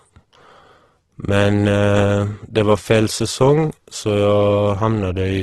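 Throughout the speech, the encoder is likely running Opus compression in its music (CELT) mode at a starved rate, with a heavy loss that fits a bitrate near 12 kbps. With too few bits for every band, the codec keeps each band's energy but rebuilds fine detail by copying lower bands or inserting noise. The voice comes out rough and grainy rather than swirly, and the super-wideband limit leaves nothing above 12.1 kHz.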